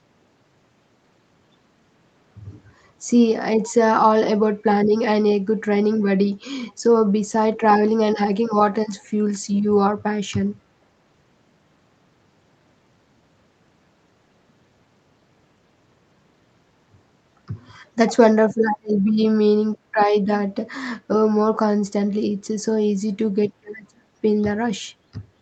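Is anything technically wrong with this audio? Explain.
Yes: an echo leak. A far-end loudspeaker's echo canceller likely let part of what its microphone picked up slip through, sending it back on the call. This produces brief, very faint ghost copies of the speech, arriving about 468 ms after the original and roughly 35 dB below it, at 6.67 to 6.73 s, 9.04 to 9.09 s and 19.06 to 19.12 s. Each scrap is only a few tens of milliseconds long, heard as a delayed trace.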